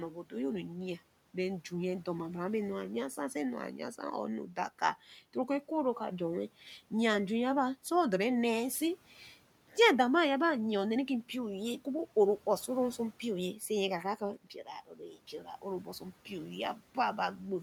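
Right at the start, from 0.11 to 0.33 s, there's speech cut by the noise suppressor. It mistook some of the quieter speech for background and pulled it down by about 10 dB, roughly a tenth of a second in total, so bits sound swallowed and faint. The same thing happens again from 14.87 to 15.17 s, this time for around 150 ms. The room noise, sitting about 25 dB under the speech, is part of the recording.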